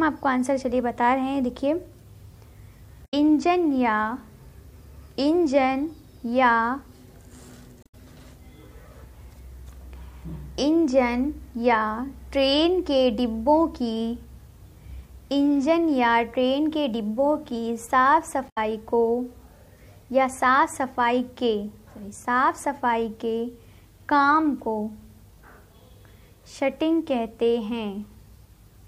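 Three short disruptions, each about 0.12 s long, break in at 3.02 to 3.14 s, 7.83 to 7.95 s and 18.46 to 18.58 s. These come from damaged data in a compressed stream: corrupted bytes make the decoder misread frames, lose sync and hunt for the next valid header.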